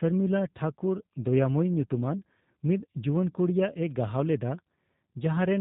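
G.729 codec damage runs through the whole speech clip, plainly audible from start to finish. The sound points to the G.729A variant at a rate consistent with 8 kbit/s: each 10 ms frame is rebuilt from a vocal tract filter, a pitch predictor and a handful of pulses rather than the original waveform. Everything above 4 kHz is gone, so sibilants are dull, and the voiced sounds carry a rough, buzzy, faintly synthetic texture.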